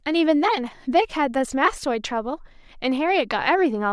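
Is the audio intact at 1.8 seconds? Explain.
Yes, the audio is intact at 1.8 seconds, with no fault at that moment.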